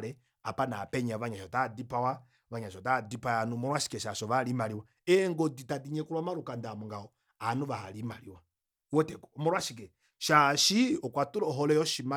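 No technical faults can be heard anywhere in it.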